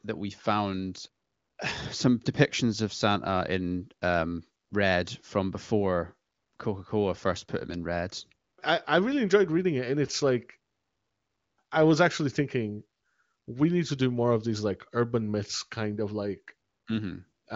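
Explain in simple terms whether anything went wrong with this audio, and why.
Nothing went wrong in this speech recording. It passed through the AMR wideband (HD Voice) phone codec, so there is no sound above about 7.6 kHz, which gives it the slightly narrowed quality of an HD phone call.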